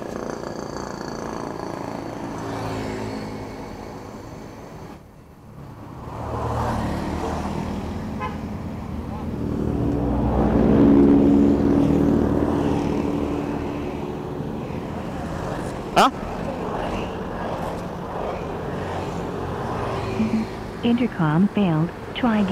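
From 15.39 to 18.51 s the audio suddenly runs at about 1.48 times its normal pace while the pitch stays where it was, so this stretch sounds rushed before the pace drops back just as abruptly. That is a time-stretched section, likely the result of software squeezing this part to fit a shorter length and holding pitch by discarding short slices of the waveform, which leaves the hurried texture.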